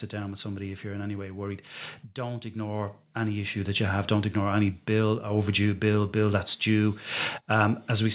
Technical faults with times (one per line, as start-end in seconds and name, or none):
2.15-4.39 automatic gain rising